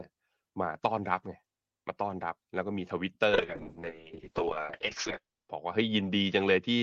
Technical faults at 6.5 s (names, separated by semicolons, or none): call bitrate drop